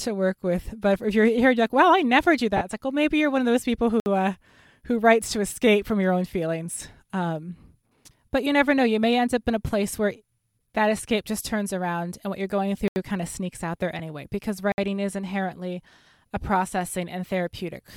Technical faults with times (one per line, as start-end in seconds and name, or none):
2.57-2.61 lost LE Audio frames
4.00-4.06 block of digital silence
12.88-12.96 block of digital silence
13.99 lost LE Audio frames
14.72-14.78 block of digital silence